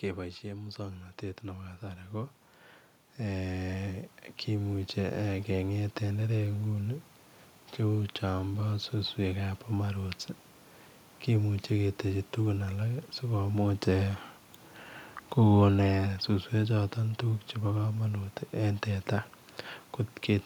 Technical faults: automatic gain rising

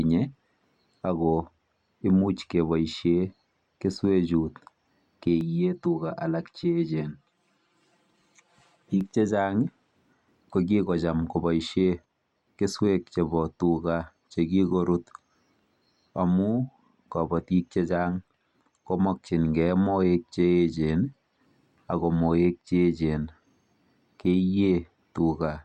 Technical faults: channel delay (comb filtering)

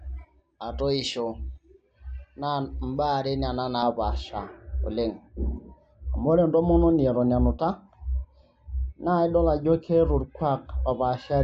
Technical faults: de-emphasis applied wrongly

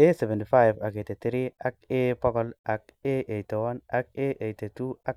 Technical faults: none

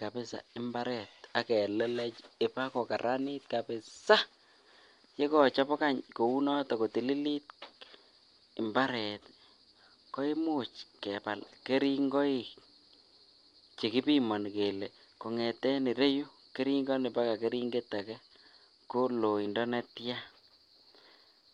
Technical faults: imaging from linear upsampling

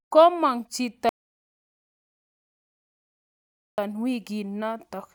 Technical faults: audio dropout to silence

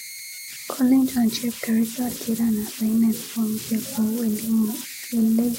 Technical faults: converter idle tones

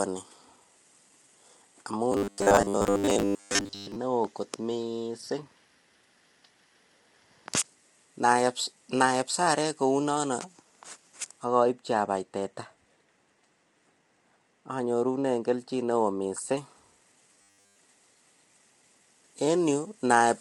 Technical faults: low-delay AAC compression; robotic sound from repeated short buffers; de-emphasis applied wrongly

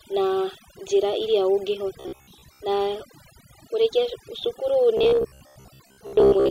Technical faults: overdone noise removal; robotic sound from repeated short buffers

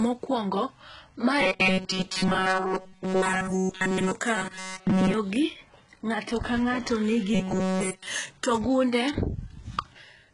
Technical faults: HE-AAC compression; robotic sound from repeated short buffers

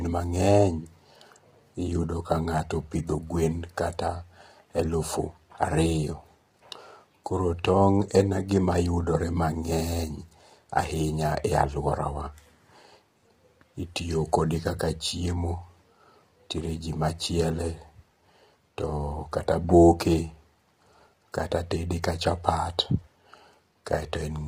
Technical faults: low-delay AAC compression

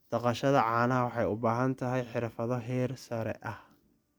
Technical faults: none

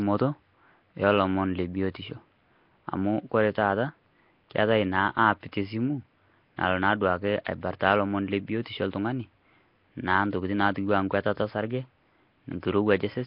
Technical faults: Nellymoser compression; pre-echo

